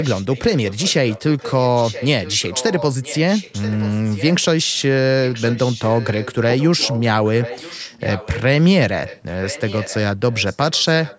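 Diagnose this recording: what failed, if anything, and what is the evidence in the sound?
Echo leak at the call-processing stage: a copy of the speech returns 980 ms late, about 15 dB down (about 20 dB in the last stretch), at 0.0–4.84, 5.24–8.37, 9.05–9.96 and 10.31–11.19 s. It is likely residue a far-end echo canceller missed. Unlike reverberation, it is a discrete repeat, not a decaying tail.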